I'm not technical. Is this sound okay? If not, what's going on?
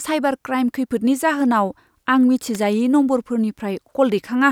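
No. At about 2.55 s, a nearby switch, motor or static discharge likely sent a brief electrical arc into the recording line, an electrical switching spike. In the speech, it comes through as a sharp snap, over almost instantly, layered on top.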